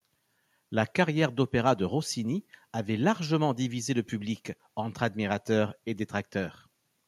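A recording of speech, with no technical fault to point to. Nothing in it calls for a time or a cause.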